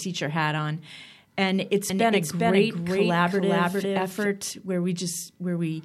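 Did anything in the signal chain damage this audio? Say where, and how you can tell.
Yes. A doubled audio track runs from 1.90 s to 4.30 s, starting just after "hat on and it's". The speech is joined by a full-band second copy at about the same level, trailing by roughly 400 ms, with no decay or room colour to suggest a real echo. It cuts in and out abruptly at both edges. The likely cause is a second, slower capture or monitoring path being mixed back into the recording.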